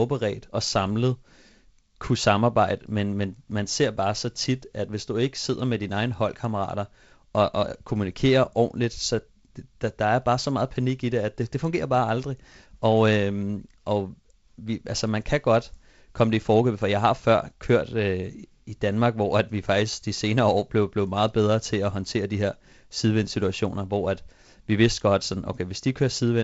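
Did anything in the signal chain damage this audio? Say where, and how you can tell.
No, no damage detected.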